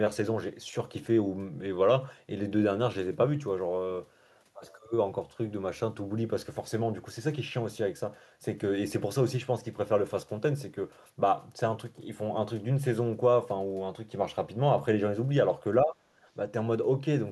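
A speech recording with speech suppressed in double talk near the end. The likely cause is an echo canceller that, with both ends talking at once, could not tell the near talker apart from loudspeaker echo and pulled the level down on everything. From 15.81 to 15.99 s the speech sinks by around 20 dB, a brief hole of about a fifth of a second where the voice drops away and then returns.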